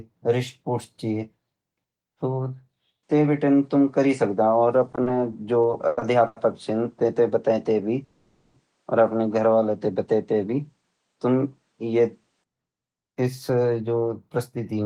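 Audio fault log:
3.03–12.44 s, input switched to a poorer device: the sound turns duller at 3.03 s, with nothing above 9.8 kHz and a faint new noise floor about 50 dB down, at unchanged level and with no silence at the switch. This is likely a change to a narrower-band input, which clears at 12.44 s.
4.87–6.38 s, repeated stalls (stutter): the audio drags and stutters through ten short holds, the longest 100 ms, totalling 310 ms or about a fifth of the span. Late packets kept emptying the jitter buffer, so the last sound was stretched each time; nothing is lost.
8.04–8.56 s, call audio freeze: the sound hangs for about half a second as a continued, fading tail rather than silence, then resumes where it stopped. Delayed packets likely emptied the jitter buffer, so a 500 ms gap was inserted with nothing missing.
12.72–14.80 s, jitter buffer speed-up: the audio runs hurried, about 8% fast at the same pitch. 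With surplus audio in the buffer, the receiver trimmed short pitch-period pieces again and again, cutting roughly 200 ms to bring the delay back down.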